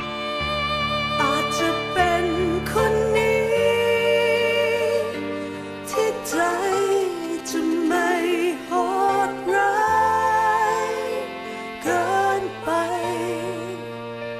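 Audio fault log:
5.98–7.97 s: GSM signalling bursts, a galloping dit-dit-dit of short buzzes at about 217 Hz from a nearby 2G phone's radio pulses, rectified by the audio circuit, roughly 20 dB below the signal.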